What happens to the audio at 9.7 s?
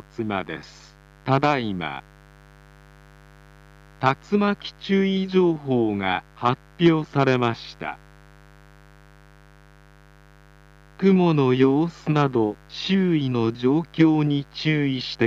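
At 9.7 s you're hearing the mains buzz, which runs through the whole clip rather than starting there. Something like a dimmer, a rectifier or a missing shield is letting sharp switching spikes from a 50 Hz supply into the signal twice per cycle, so the harmonics of 50 Hz stack up into the kilohertz range. It comes across as a steady, raspy buzz sitting well under the main sound, roughly 30 dB down.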